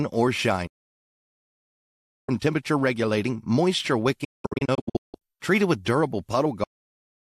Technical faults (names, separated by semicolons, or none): digital broadcast dropout; cut-off end